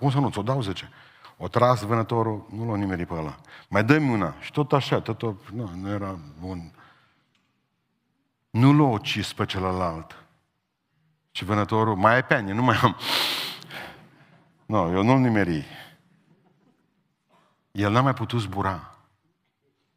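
No technical faults can be heard anywhere in the recording.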